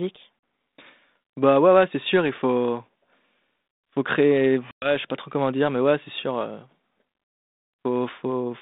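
Packet loss on an ADPCM call strikes twice. Each time, a run of packets fails to arrive and is filled with silence, and the decoder's adaptive predictor and step size lose track of the sender's. At 0.39 s a 40 ms gap, a few packets' worth, cuts a hard-edged hole. At 4.71 s, after "faut créer", about ten packets vanish (110 ms). The speech resumes with "je sais pas trop" briefly distorted until the decoder realigns.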